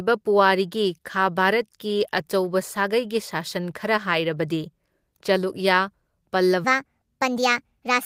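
From 6.64 s to the end at 8.05 s, the speech jumps into a section at the wrong speed, running 1.39 times faster than the preceding audio. Pitch and pace rise together, so the voice turns hurried and high, roughly five semitones up. The likely cause is a segment played back against a mismatched clock. On a spectrogram, harmonics and formant bands step abruptly upward and spread wider apart at 6.64 s; in the waveform, syllables become visibly compressed in time.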